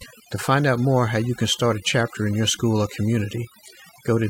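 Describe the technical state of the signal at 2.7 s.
At 2.7 s the speech carries overdone noise removal, present throughout the clip. An over-aggressive noise reducer is gating individual frequency bands near its noise estimate, taking quiet speech detail with them. The background drops and breaks up into twinkling specks; a spectrogram shows isolated flickering dots in dark gaps and ragged, hollowed harmonics.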